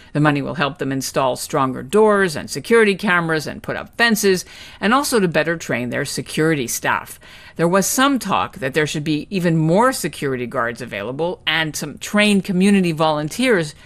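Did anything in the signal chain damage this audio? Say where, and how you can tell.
Yes, at the codec stage: the speech was likely squeezed through MPEG Layer II (MP2) compression at a low rate, consistent with something around 80 kbps. Too few bits to cover all 32 sub-bands means the upper bands switch off and flicker back on, and the ones that remain are coarsely quantised. Throughout the clip, the speech sounds dull and carries a gurgling, granular roughness, which is plainly audible.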